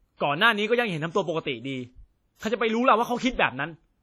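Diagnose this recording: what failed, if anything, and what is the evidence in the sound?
The codec stage is where this speech recording most likely failed: the audio shows the heavy damage of WMA compression, a transform codec run at a low bitrate, which fits something around 32 kbps. Throughout the clip, quantisation noise is smeared across long blocks, so each syllable rings and trails into a washy haze. A hiss rises and falls with the level, and quieter spectral detail has been zeroed, leaving a hollow, watery timbre.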